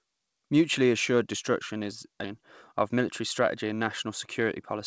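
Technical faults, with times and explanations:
2.24 s, skip ahead: about half a second of speech is missing, and the two sides are butted together with no silence or fill in between. Unlike a dropout, nothing marks the hole; the speech simply jumps forward, because a stretch of audio was dropped while later audio was already queued.
2.34 to 4.76 s, jitter buffer speed-up: the speech runs about 6 percent fast while pitch stays unchanged, so it sounds slightly hurried rather than higher. That separates it from resampling. The receiver trimmed short pitch-period slices repeatedly, removing roughly 150 ms to shrink its backlog.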